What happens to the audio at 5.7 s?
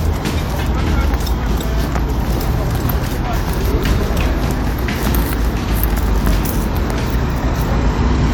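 Nothing goes wrong at 5.7 s; the sound continues intact through that moment, with no dropout, click or distortion.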